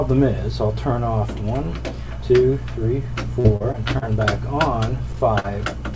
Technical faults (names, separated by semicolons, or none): repeated packet loss (robotic sound); short concealed packet loss